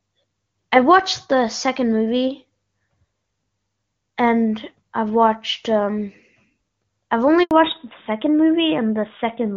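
At 7.43 s the speech cuts out abruptly and stays silent for 80 ms, resuming at 7.51 s. This is a handover gap: the call was switched between networks, no speech frames arrived during the changeover, and whatever was said in that window is gone.

From 7.51 s to the end, the voice sounds muffled and coarser, with nothing above 4 kHz. This is a fallback to narrowband. Before this point, the HD Voice (AMR-WB) sound is clear, which suggests a high wideband rate. Afterwards, the call drops to the older narrowband AMR codec, consistent with its 12.2 kbit/s mode.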